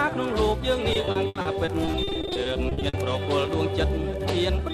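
Repeated packet loss (robotic sound) runs from 0.93 to 2.95 s. Across those two seconds, packets keep failing to arrive in time: 22 short holes open up, the longest around 80 ms. Each hole is papered over by extending the last received sound, so roughly 600 ms, about 30% of the stretch, is synthetic fill. The rapid alternation of real and stretched audio sounds choppy, with fragments missing.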